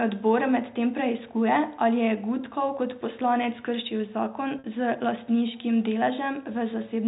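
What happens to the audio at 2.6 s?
Nothing goes wrong at 2.6 s; the audio there is intact, carrying the narrow band below 4 kHz of its G.711 telephone coding as it does throughout.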